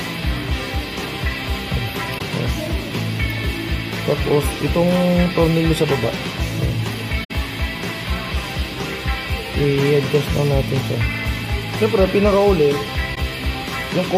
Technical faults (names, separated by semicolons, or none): AAC frame loss with muting